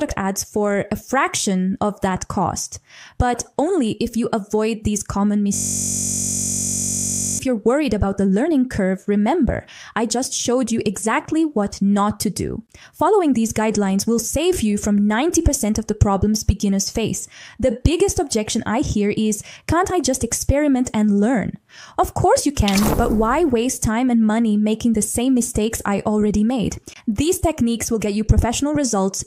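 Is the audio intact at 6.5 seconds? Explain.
No. A system hang loop runs from 5.55 to 7.39 s. The system froze while a 21.33 ms buffer replayed, giving a steady 46.9 Hz buzz.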